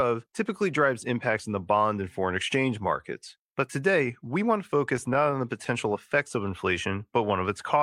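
From 4.77 to 5.67 s, between "today we want to" and "effects of", scattered short gaps appear: about five lost packets, each patched by extending the preceding sound, the longest around 15 ms. Unlike a single dropout, these are brief isolated ticks and smears spread across the speech.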